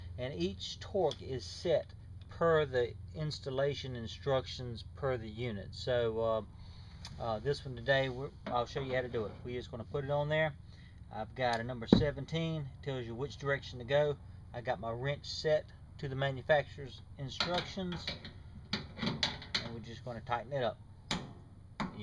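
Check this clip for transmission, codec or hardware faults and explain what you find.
Nothing here points to a transmission, codec or hardware problem; the audio runs without any dropouts, glitches or distortion worth flagging.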